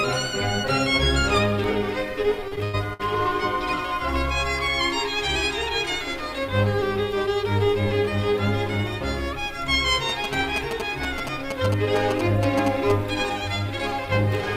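From 2.48 to 3.00 s, repeated stalls (stutter): the jitter buffer ran dry four times, each gap of up to 97 ms filled by extending the preceding sound, so the passage drags.

From 10.09 to 12.92 s, GSM signalling bursts: a nearby 2G phone's radio bursts, rectified in the audio circuit, produce a galloping dit-dit-dit of short 217 Hz buzzes just below the programme level.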